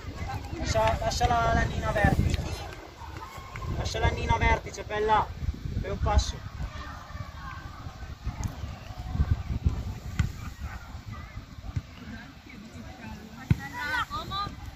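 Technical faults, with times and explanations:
No technical faults can be heard anywhere here.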